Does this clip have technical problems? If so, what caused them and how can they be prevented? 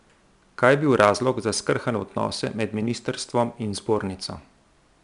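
Yes, 4-bit ADPCM compression throughout the speech leaves gritty hiss riding on loud passages, with nothing above about 10.6 kHz. Keep audio in PCM or use a modern codec instead.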